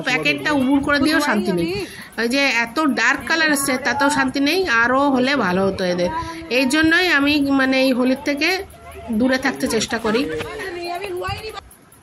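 From 0.13 s to 11.96 s there are clock slip clicks, faint ticks roughly every tenth of a second, likely from two unsynced clocks about 200 ppm apart.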